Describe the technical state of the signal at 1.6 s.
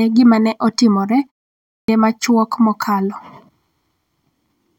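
At 1.6 s there is a clipped start after a pause: following a 0.33 s silence, the output device is still waking, so 1.56 to 1.88 s is swallowed, about 324 ms, and speech bursts in abruptly, missing its opening sounds. Muted pauses would only drop background, never speech.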